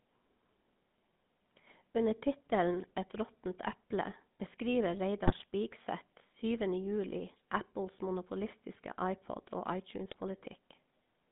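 From start to finish the speech carries the buzzy, gravelly roughness of the GSM full-rate codec, which fits its 13 kbps rate. The vocal tract is modelled and driven by coarse pulse excitation, so the spectrogram shows a band from 150 Hz to 3.6 kHz, empty above, with grainy harmonics.

At 5.24 to 5.44 s, just after "råttent eple beskriver", GSM bit errors break the decoded speech into squawks and gargling. Corrupted filter, pitch and gain values warp the spectrum frame by frame. The waveform shows jagged level jumps, and the spectrogram shows smeared blocks, which fits around ten damaged frames.

A shorter burst of GSM bit errors hits at 10.08 to 10.16 s, giving a brief pop and gurgle. Mangled decoder parameters distort each affected frame. The spectrogram shows a few broken vertical slices, consistent with about four frames, and the waveform shows a sudden irregular spike.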